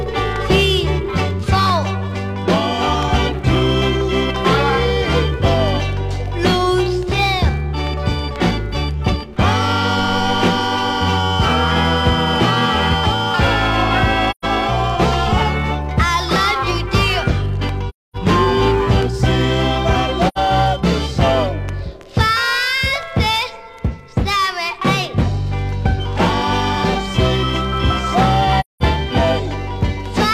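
AAC frame loss with muting leaves soft-edged dropouts at 14.30–14.45, 17.89–18.16, 20.28–20.38 and 28.60–28.83 s, lasting about 128, 256, 85 and 213 ms. The decoder zeroed the missing frames' spectra, so overlapping windows fade the sound out and back in. Spectrograms show full-band vertical gaps, and waveforms show tapered silences.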